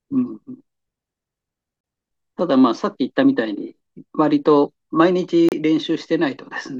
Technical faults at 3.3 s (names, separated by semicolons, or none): none